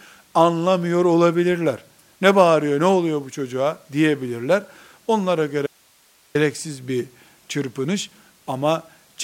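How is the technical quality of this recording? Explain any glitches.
The recording has one clear glitch: an audio dropout to a faint residue from 5.67 s to 6.35 s, lasting about 0.68 s. The speech cuts out abruptly mid-flow and comes back just as suddenly, and the gap holds only hiss, roughly 35 dB below the speech level. The likely cause is the wanted signal being lost upstream while the later stages of the chain stayed live and passed their own noise. The hard edges at both ends, and hiss rather than room sound, mark it as a break and not a natural pause or a fade.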